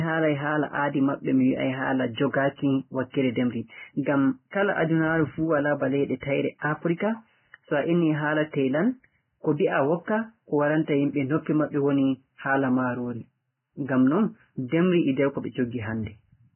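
Right through the speech there's heavy Vorbis compression damage, likely from a very low bitrate, around 10 kbps. Nothing survives above 3 kHz, and what's left is hissy and grainy, because the remaining detail has been quantised so coarsely it turns into noise.

At 3.1 s there's a pre-echo, running to about 3.14 s. The codec smeared its quantisation noise across the whole block, so roughly 37 ms of hiss arrives just ahead of a sharp onset, which then sounds softened and blurred.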